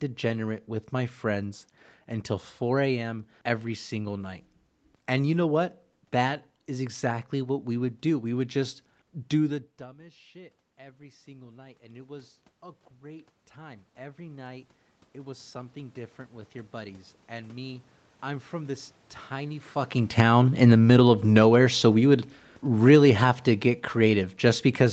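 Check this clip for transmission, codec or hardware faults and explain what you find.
The automatic gain control misbehaves twice, first by climbing and then by pulling back.

Automatic gain rising, from 9.77 s to 21.81 s: just after "would just do the", the talker moves back from the microphone at around 9.5 s and the level at the microphone drops by about 24 dB. The gain control responds slowly, adding about 13 dB over roughly twelve seconds. The voice and the room noise swell together, so the background climbs in step with the speech instead of staying put.

Automatic gain falling, from 20.05 s to the end: the talker moves again at around 19.5 s, and the gain that was raised for the quiet passage is now too high. The controller starts lowering it, but gradually, so the speech first arrives loud and then sinks over the closing seconds, taking the room noise down with it. The voice reaches these stages through the Opus call path, with nothing above 8 kHz.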